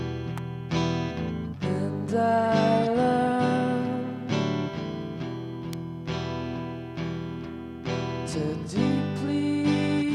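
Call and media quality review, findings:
Electrical switching spike at 0.38 s and 5.73 s: sharp snaps peaking near -15 dBFS, likely a nearby switch or motor arc coupling into the audio line.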